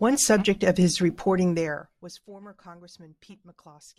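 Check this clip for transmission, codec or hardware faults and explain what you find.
One fault stands out, a burst of zipper noise. From 1.44 to 2.25 s, just after "subject of his", a fine ticking rasp rides on the speech as the level drops by roughly 25 dB. The gain moves in unsmoothed steps, about a hundred a second, and each jump clicks.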